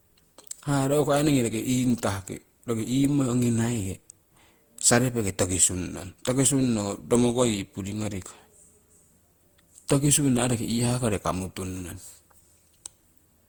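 Throughout, the speech shows generation loss, likely from about ten Opus re-encodes near 64 kbit/s: swirly, hollow smearing and blurred attacks, worse than one pass at that bitrate.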